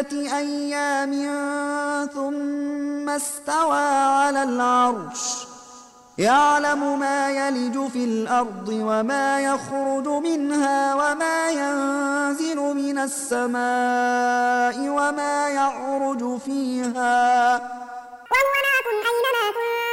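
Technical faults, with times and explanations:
18.26–19.93 s, section at the wrong speed: the closing stretch plays 1.92 times too fast, raising pitch by about ten semitones, likely from a clock mismatch.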